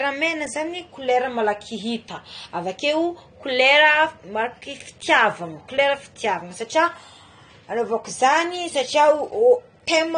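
AAC compression runs throughout. Nothing reaches above about 9.7 kHz, so the speech sounds dull, smeared and fizzy on sibilants. A low-bitrate AAC-LC encode is the likely cause.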